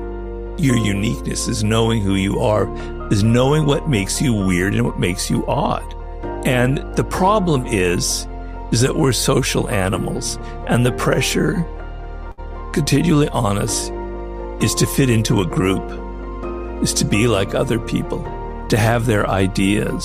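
Right around 12.31 s, running to about 12.40 s, there's a short stall from a late packet. A chunk of audio didn't show up on time, the jitter buffer ran dry, and the receiver filled the gap by stretching the last bit of sound for about 62 ms until the packet turned up. Nothing actually gets lost, but that sound hangs on a touch too long with a faint buzz or dip, and everything after it lands about 62 ms later.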